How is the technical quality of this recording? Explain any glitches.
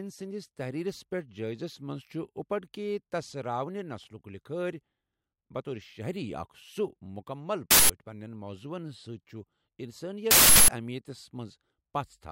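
Two harsh glitches break the speech. Both are an uninitialised buffer. At 7.71–7.90 s and 10.31–10.68 s, leftover memory plays as loud digital noise. The lengths fit 8192- and 16384-sample blocks.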